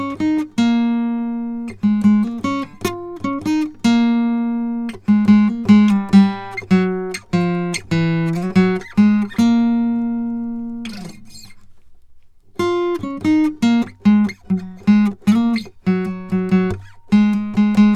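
The music signal holds steady and continuous throughout, with nothing in it pointing to a technical fault.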